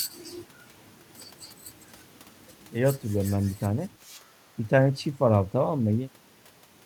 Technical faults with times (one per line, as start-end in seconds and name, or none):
none